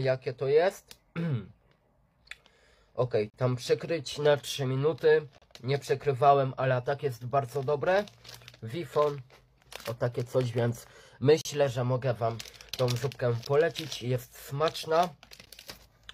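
The audio has gaps between stream segments: silent holes with hard edges at 3.30–3.34 s, 5.38–5.42 s, 9.41 s, 11.41–11.45 s, 13.45 s and 15.45 s, from about 6 to 38 ms long. Segment timestamps don't quite meet, so the player pads these one-second segment boundaries with silence. Nothing is lost.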